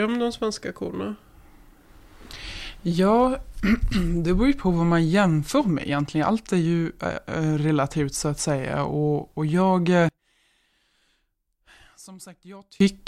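One channel inverted, from 10.09 to 12.80 s: the speech suddenly drops by about 26 dB and returns only as a faint trace before recovering at 12.80 s. The likely cause is one stereo channel flipped in polarity, so when the two channels are summed to mono, the centred speech present equally in both cancels almost entirely. What survives is only the small difference between the channels.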